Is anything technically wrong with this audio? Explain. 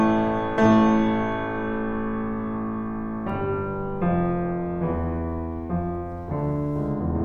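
Yes, there are two sharp clicks in the music, at 1.32 s and 4.01 s. Each one is likely dropped samples: a couple of samples go missing, the waveform jumps straight to a later value, and that step comes through as a single tick far too brief to remove any sound.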